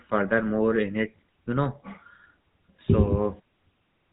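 From start to finish the speech carries the character of the GSM full-rate codec, at a level of damage that is plainly audible. The coder rebuilds the voice from a vocal-tract model excited by a sparse, regular pulse train, so the texture turns buzzy and gravelly, consistent with the 13 kbps full-rate mode. Bandwidth stops at about 3.8 kHz, leaving sibilants dull and the overall sound narrow and telephone-like.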